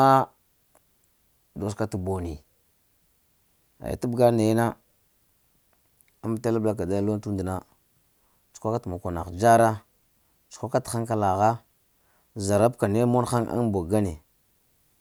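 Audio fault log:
Nothing to log here: the speech has no dropouts, glitches or other audible faults anywhere along its length.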